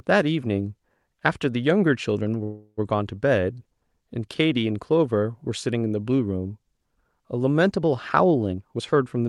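A call audio freeze runs from 2.43 to 2.79 s in this speech recording. The last sound is stretched into a fading buzz or hiss for about 340 ms, ending in roughly 50 ms of silence. Speech then resumes where it stopped, so the pause is inserted rather than anything lost, likely because packets were held up and the jitter buffer drained. A jitter buffer speed-up follows from 8.52 to 9.24 s. There, speech runs at about 135% pace with unchanged pitch and sounds hurried, as roughly 300 ms of excess buffered audio is trimmed away in many short pitch-period cuts.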